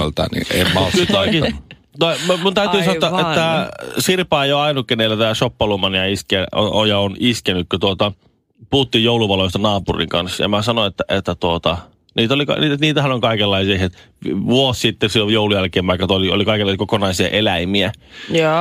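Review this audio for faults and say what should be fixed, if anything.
Sample clock jitter runs through the whole recording: the converter's clock wanders, so each sample is taken a little early or late at random, by something on the order of a microsecond or two. Because the timing error matters most where the waveform changes fastest, the speech picks up a grainy hiss that swells on loud and sibilant passages, sitting only around 35 dB below the signal, and drops away in the pauses. To prevent it, clock the converter from a clean, low-jitter crystal or well-filtered PLL reference rather than a noisy recovered clock.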